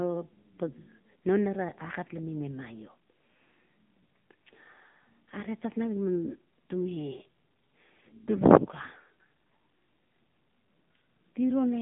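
Speech that sounds thin, boxed-in and buzzy from start to finish, with a synthetic, processed edge to the voice. Nothing is heard above about 3.7 kHz, and the usable band runs only from roughly 150 Hz to 3.5 kHz. This is the AMR narrowband mobile codec: the audio was squeezed to an 8 kHz telephone rate and rebuilt from a vocal-tract model with sparse pulse excitation. The plainly audible coding damage fits a mode near 8 kbps.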